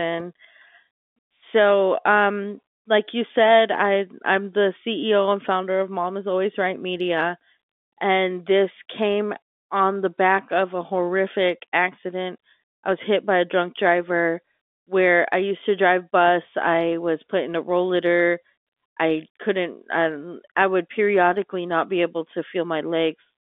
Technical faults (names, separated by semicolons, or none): none